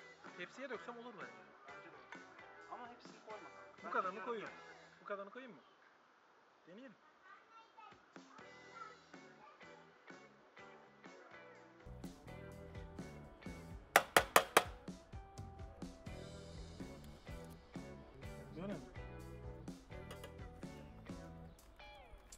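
From the start to 11.86 s the audio is band-limited, with nothing above 7.6 kHz, so it sounds dull and somewhat boxy. The sound also carries a background noise floor roughly 30 dB below the signal. At 11.86 s the top end and the cleaner background return abruptly, with no gap and no obvious jump in level. This fits an input switched to a poorer device, most likely another microphone or a headset's call profile.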